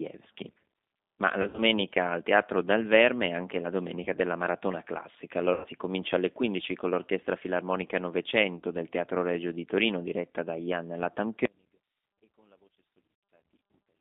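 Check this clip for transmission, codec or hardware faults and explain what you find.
Three kinds of fault are audible in the speech.

G.729 codec, throughout: an 8 kbit/s analysis-synthesis coder rebuilds the voice from a filter, a pitch predictor and a few pulses, leaving a roughly 250 Hz to 3.7 kHz band with a plainly rough, synthetic timbre.

VoIP packet loss concealed by the speech codec, at 1.42 to 1.61 s, 4.03 to 4.07 s, 5.54 to 5.67 s, 8.57 to 8.64 s and 13.15 to 13.23 s: missing frames are filled by extrapolating the last pitch and filter with falling gain, producing brief buzzy or fading smears. The first event scatters about 100 ms of loss over 160 ms.

Audio dropout to a faint residue, from 11.45 s to the end: the speech cuts abruptly to a faint residue, about 35 dB below the signal, likely because the wanted signal was lost while the path stayed live. The 13.15 s concealment falls inside this gap.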